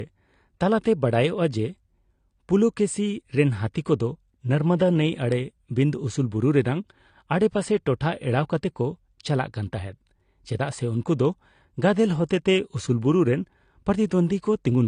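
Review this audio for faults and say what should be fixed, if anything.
The speech has nothing above 9.8 kHz for the whole clip. It also keeps the artefacts of heavy compression. The file itself is a high-rate MP3. This is likely low-bitrate audio saved at a high bitrate. The sound points to an earlier AAC encode at around 32 kbit/s, later re-saved at a 192 kbit/s-class rate. That first encode removed the highs and left the artefacts. Re-encoding only preserved the damage. It added size, not detail. To prevent it, encode once from the original uncompressed recording.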